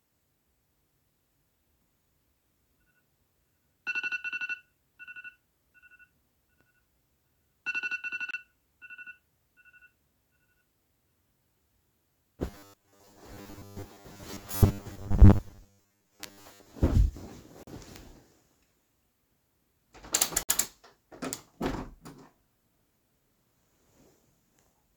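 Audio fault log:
8.31–8.34 s, 17.63–17.67 s and 20.43–20.49 s: Bluetooth stall. The sound drops to silence for 28 ms, 41 ms and 58 ms, then resumes. Likely cause: interference delayed packets, the headphone buffer emptied, and playback waited for the resends.
12.48–16.74 s: robotic sound from repeated short buffers. The audio becomes a stiff, metallic buzz pitched at 100 Hz. About half the material is repeated. Likely cause: audio arrived too rarely, so 10 ms chunks were looped in place of the skipped content.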